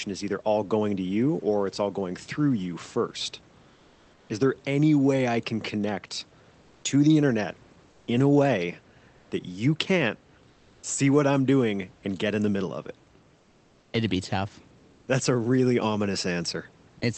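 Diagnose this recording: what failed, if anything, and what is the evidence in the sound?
Comfort noise in place of the background at 3.73–4.29 s (after "going through you first"), 7.89–8.07, 10.53–10.83, 13.37–13.93 and 14.91–15.07 s. The room hiss turns smooth and featureless, about 1 to 3 dB quieter, likely the codec's discontinuous transmission pausing while the receiver synthesises filler noise.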